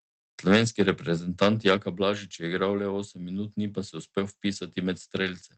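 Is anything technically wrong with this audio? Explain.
Yes, there are two faults in this speech clip.

Between 1.42 and 1.74 s, the loudest syllables take on a harsh, crackling edge. This is likely microphone overload: the input level pushed the peaks about 5 dB past what the converter could represent, so their tops were flattened. On the waveform, around 2 percent of samples sit as flat-topped plateaus. On the spectrogram, broadband smearing rises above the voice harmonics in that stretch.

At 1.77 s, immediately after that distortion, the voice and the background both drop abruptly by about 5 dB. This is likely the microphone volume being stepped down by the call software in a single move as it reacted to the overload. On the waveform, the envelope shows a clean step to a lower level. The spectrogram darkens evenly across all frequencies at that instant, with no fade. The audio passed through an Opus call path whose content tops out near 8 kHz.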